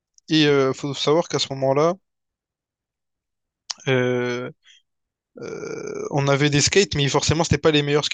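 No technical faults occur at any point in the recording, so there is nothing to describe in time order.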